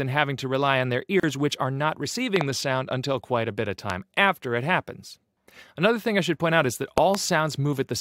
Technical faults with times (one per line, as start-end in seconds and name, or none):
1.20-1.23 gap at a join of encoded pieces
2.36-2.43 loud pop
3.90-3.92 loud pop
6.98-7.17 loud pop